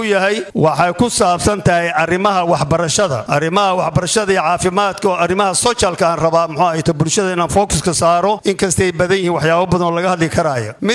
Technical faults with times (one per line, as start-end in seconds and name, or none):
none